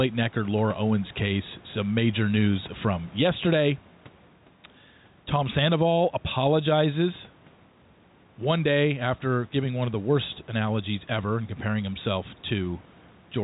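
A speech clip with gain pumping throughout: the background swells up in the pauses and drops by around 10 dB under each loud syllable, squashing the level range. The likely cause is input gain set far too high, with a fast limiter or compressor clamping down on every peak. Room noise about 33 dB below the speech rides up and down with it, and the band stops at 4 kHz, which fits G.711 telephone coding.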